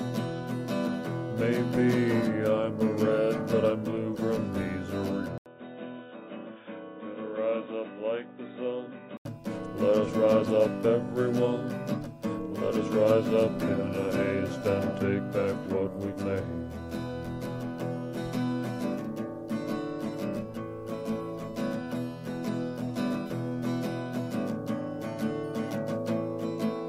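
The input most likely switched to a poorer device from 5.38 to 9.25 s: after a brief silence of 80 ms, the audio turns dull and boxy with nothing above 3.8 kHz, drops roughly 10 dB, carries a new faint noise floor, then clears again.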